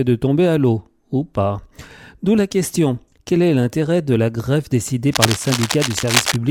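From 5.08 to 6.36 s, cable scratch noise rasps across the sound at nearly the same level, likely from a worn cable or connector being moved. Unlike steady hiss or isolated clicks, it comes as dense, uneven bursts of scratching.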